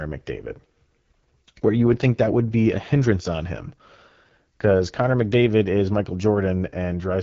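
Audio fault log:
Throughout: AMR wideband (HD Voice) codec. The speech sounds rough and raspy, consistent with the 8.85 kbit/s mode. A spectrogram shows nothing above about 7.6 kHz and smeared, noise-like energy in place of harmonics between 6.4 and 7 kHz.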